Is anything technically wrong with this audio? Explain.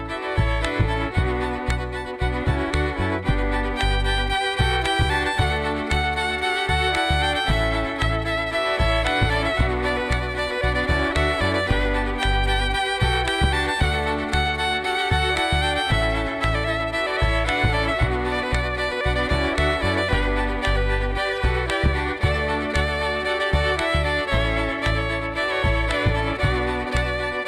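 No, nothing technically wrong stands out anywhere in this audio.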